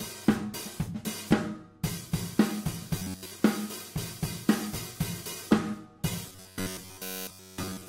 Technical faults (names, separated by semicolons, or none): robotic sound from repeated short buffers